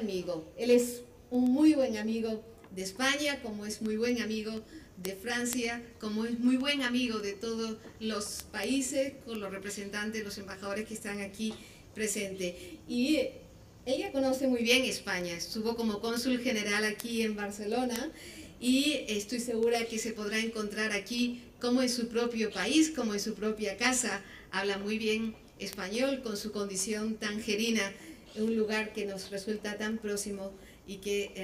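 From 0.15 s to 31.35 s, a steady train of sharp ticks runs under the sound. These are word clock ticks. They come roughly ten times a second, about every 0.1 s, some three hundred in all. The digital link is being read by a device on its own clock, not locked to the sender. The two clocks differ by something like 200 ppm. Each time they slip past each other, one sample is dropped or repeated, and that small jump clicks.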